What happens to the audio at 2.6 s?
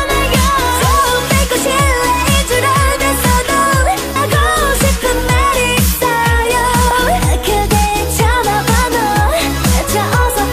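Nothing goes wrong at 2.6 s; the audio plays through that moment intact, with no dropout, glitch or other fault.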